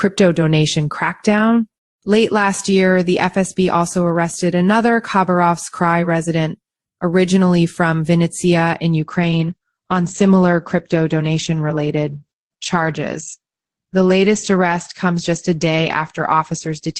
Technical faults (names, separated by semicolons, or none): adaptive stream at a lower bitrate